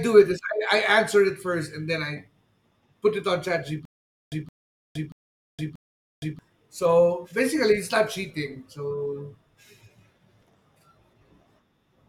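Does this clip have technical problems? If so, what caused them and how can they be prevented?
Yes. From 3.85 to 6.39 s the speech has a stutter with silent gaps. A 168 ms burst repeats four times, once every 634 ms, with about 466 ms of digital silence between repeats. The likely cause is a stalled stream replaying its last fragment. Larger playback buffering prevents this.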